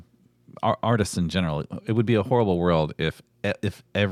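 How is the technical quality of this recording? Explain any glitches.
No glitches or technical faults are audible anywhere in the recording.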